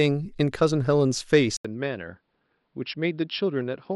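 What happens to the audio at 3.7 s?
At 3.7 s the sound is still in the input switched to a poorer device condition, which begins at 1.57 s after an 80 ms gap and runs to the end. The likely cause is the recording changing over to a lesser microphone or a headset's call profile, which passes a narrower band. Nothing is heard above 5.4 kHz, so the speech sounds dull and boxy. It is also a few dB quieter, over a faint new noise floor.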